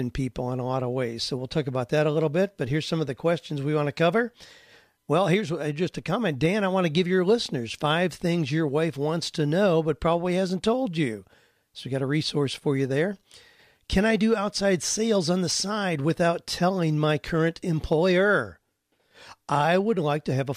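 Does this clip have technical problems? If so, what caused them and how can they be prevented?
No, this clip has no technical problems, so there is nothing to trace back to a cause or to prevent.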